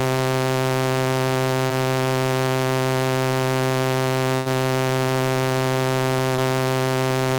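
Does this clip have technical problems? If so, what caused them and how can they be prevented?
Yes. At 1.67 s and 6.36 s, short concealed packet loss: about 20 ms went missing, and the receiver extrapolated the preceding sound, leaving a brief smear. At 4.36 to 4.48 s, a burst of packet loss removed about 100 ms; concealment extended the last sound and faded it before the audio resumed. A steadier network path, a larger jitter buffer and forward error correction would prevent these dropouts.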